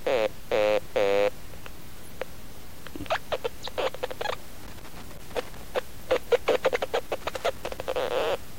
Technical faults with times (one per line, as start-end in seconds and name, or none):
4.63-5.64 loose connector crackle
7.21-7.84 loose connector crackle